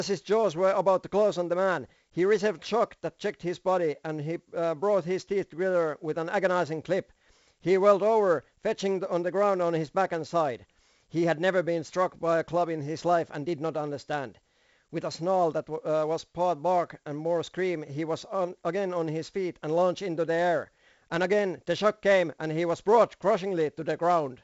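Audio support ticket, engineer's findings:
4-bit ADPCM compression, throughout. Gritty hiss riding every loud speech passage, rough distortion on sharp onsets where step size lags. Band ends near 7.7 kHz, dulling the top. Heavy damage; fits 64 kbps, 4-bit steps from a prediction.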